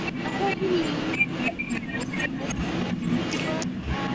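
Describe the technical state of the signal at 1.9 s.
At 1.9 s the sound sits inside a brief dip from 1.84 to 1.93 s, which points to speech suppressed in double talk. With both sides talking, the echo canceller likely could not tell its own talker from the loudspeaker return and pulled the level down. The result is a shallow dip of a few decibels lasting roughly a tenth of a second. On the waveform this shows as a short pinch in the envelope. On a spectrogram it appears as a faint vertical band of reduced energy across the speech.

Underneath, echo leak runs through the whole clip, 0.00 to 4.15 s. A copy of the speech returns about 0.31 s late at roughly the same loudness as the direct sound, likely because a loudspeaker's output reached a microphone and the canceller did not remove it. A spectrogram shows the harmonic patterns repeated and shifted 307 ms to the right. The waveform shows doubled, overlapping envelopes. 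Energy stops at 8 kHz, the ordinary upper limit of the call's microphone path.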